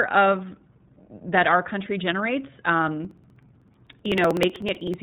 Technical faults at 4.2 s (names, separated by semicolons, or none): iLBC codec; periodic USB or driver dropouts